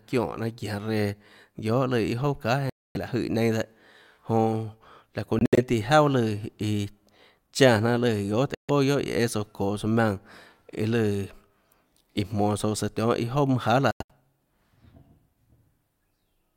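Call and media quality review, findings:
Silent gaps in speech at 2.70–2.97 s, 5.39–5.58 s (broken, longest about 70 ms), 8.55–8.70 s and 13.91–14.11 s. Likely Bluetooth dropout: late packets discarded, audio resumes skipped ahead.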